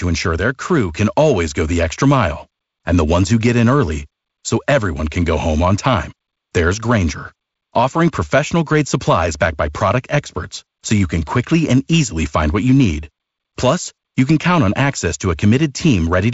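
No technical faults turn up anywhere in this speech recording. It carries the marks of G.722 wideband telephone coding at 48 kbit/s, with nothing above 7.7 kHz and a light graininess from the lower band's reduced bit allowance.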